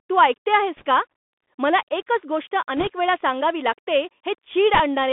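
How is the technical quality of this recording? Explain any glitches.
The quality is poor: the speech is narrowband and coarse throughout, with three short crackly bursts.

The whole clip carries Bluetooth CVSD headset codec damage. The band is roughly 250 Hz to 3.5 kHz, which fits a 64 kbps CVSD link. The adaptive one-bit coder lags on loud, high sounds, so sibilants turn scratchy over a granular hiss.

Bit errors on a Bluetooth voice link occur at 0.77 to 0.84 s, after "तू ऐकते"; at 2.77 to 2.87 s, before "वेळा सांगावी लागते"; and at 4.74 to 4.80 s. Each flipped bit carries little weight and fades quickly, so there are no loud clicks. Around 1.5 to 2 percent of bits go wrong, which produces a brief rushing crackle.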